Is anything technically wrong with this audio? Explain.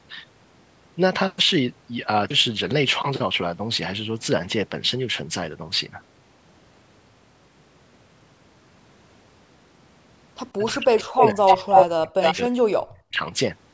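Yes. From 10.56 to 13.22 s the speech dips and breaks up, dropping by about 40 dB at its deepest for roughly two seconds in total. This is speech suppressed in double talk, likely an echo canceller turning down its own talker along with the loudspeaker echo.

Brief delayed copies of the speech also surface at 10.65, 10.97, 11.2, 11.5, 11.75 and 12.22 s, lagging by 290 ms. They range from about 20 dB below the speech to about 5 dB above it. This is echo leak, likely loudspeaker pickup that cancellation failed to remove.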